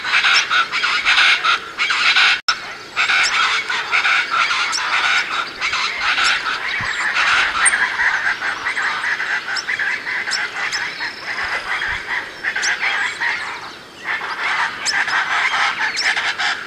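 The audio drops to clean silence from 2.40 to 2.49 s, an 84 ms gap, then carries on. This is a Bluetooth stall, likely from radio interference delaying packets until the headphones' buffer ran empty. Unlike a crackle-type dropout, the gap is silent, with no noise burst.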